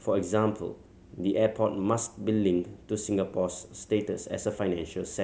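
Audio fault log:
Nothing to log here; the speech comes through with no faults to point at anywhere in it.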